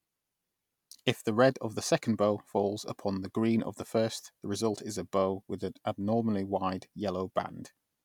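Listening to this recording of speech, nothing technical stood out as a problem.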